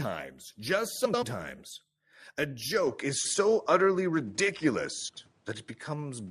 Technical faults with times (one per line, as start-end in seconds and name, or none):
1.05-1.23 frames out of order
2.87-6.31 input switched to a poorer device
3.16-3.34 frames out of order
5.08-5.26 frames out of order